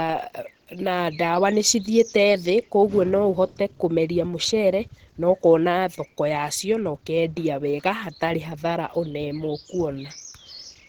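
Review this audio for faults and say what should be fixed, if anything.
Opus compression damage is plainly audible across the whole speech clip. The voice sounds hoarse and muffled, and the upper band turns rough and grainy. That points to the encoder's hybrid mode: a speech coder handles the low band, and the upper band is filled in coarsely. The band still reaches about 20.3 kHz, so nothing is cut off. The grit fits a low bitrate near 16 kbps as the likely cause. To prevent it, encode speech at 32 kbps or more, or keep a lossless master.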